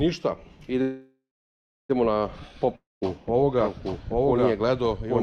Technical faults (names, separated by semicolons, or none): call audio freeze; long network dropout; doubled audio track